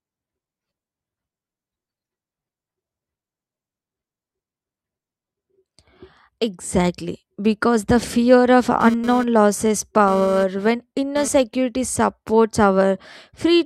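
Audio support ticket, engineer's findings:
Hard, raspy buzz, 8.81 to 11.28 s, ending just before "security supports". GSM phone buzz: a nearby 2G handset transferring data, bursting 217 times a second. The audio input stage rectifies the RF pulses. 217 Hz plus harmonics, about 14 dB below speech.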